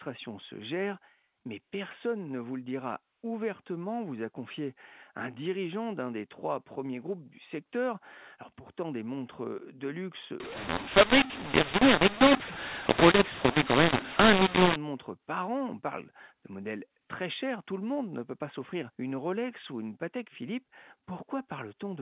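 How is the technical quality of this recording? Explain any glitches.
The recording is narrowband telephone speech, cut off at 4 kHz, which fits 8 kHz G.711 coding, and it contains one clear glitch.

From 10.4 to 14.76 s there is a mu-law and A-law mix-up. The sound points to A-law samples decoded with the mu-law curve, so levels are scrambled and quiet samples are lifted above silence. Speech turns harsh and distorted and pauses fill with noise. Unlike plain clipping, the quietest passages are corrupted too.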